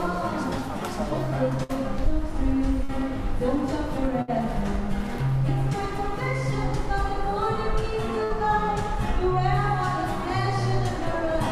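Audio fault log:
1.63–1.72 s, 2.83–2.91 s, 4.22–4.31 s, 8.24–8.33 s: burst of packet loss. The receiver stretches the last sound for 50–62 ms while fading it, then playback resumes about 60 ms further on. A spectrogram shows flat, dimming streaks before a hard jump; the waveform shows repeated, shrinking cycles.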